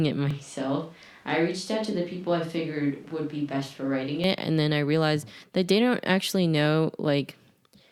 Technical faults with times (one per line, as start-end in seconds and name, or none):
0.31-4.24 switch to a distant microphone